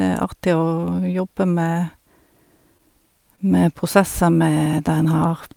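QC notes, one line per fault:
2.78–2.94 s and 3.36–3.40 s, short concealed packet loss: about 20 ms of audio failed to arrive each time. The receiver covered the gap by extending the preceding sound, for 10 ms at the first event and 18 ms at the second, adding roughly 10 ms and a few ms of length, then crossfading back. Each event is heard as a brief smear or wobble. On a spectrogram, harmonics or noise bands run flat through the gap. On the waveform, repeated cycles lead into a blended seam.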